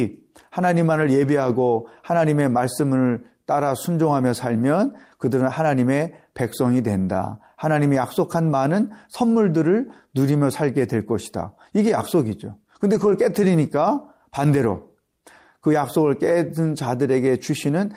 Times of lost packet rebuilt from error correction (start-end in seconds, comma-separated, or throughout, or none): 12.95-13.09